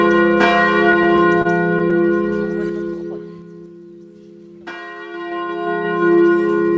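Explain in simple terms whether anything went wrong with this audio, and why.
Yes, two things went wrong. Between 0.92 and 1.93 s, the network delivered the audio late, so the receiver kept running out. Six times it stretched the last bit of sound to cover the wait, the longest for 29 ms. Nothing is lost, but the sound drags and stumbles there. This is repeated stalls, or stutter.

The volume was also changed in coarse jumps instead of a smooth glide. From 2.33 to 3.81 s it steps down about four times a second, and from 5.05 to 6.13 s it steps back up about five times a second. Each jump adds a tiny click, giving a ticking, zipping texture while the level moves. This is zipper noise.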